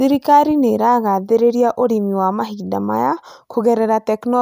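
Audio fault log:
Nothing stood out on listening to the speech in this clip.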